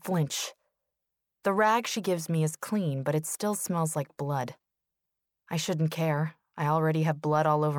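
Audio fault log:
No technical faults can be heard anywhere in the speech signal.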